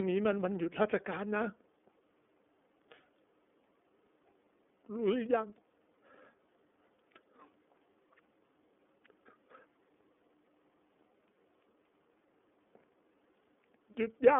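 Thin, boxy speech runs the whole way through, with nothing below about 250 Hz or above 3.5 kHz and a plainly rough, synthetic edge. That points to the iLBC codec, coding each 30 ms frame on its own, which fits its 13.33 kbps mode.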